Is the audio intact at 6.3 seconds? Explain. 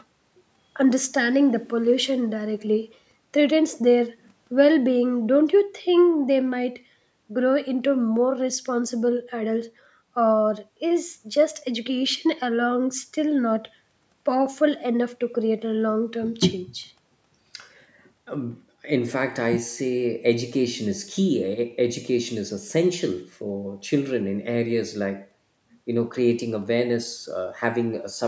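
Yes, the speech at 6.3 seconds is intact, with only the ordinary call microphone processing audible there, which trims the lowest bass and leaves nothing above 8 kHz.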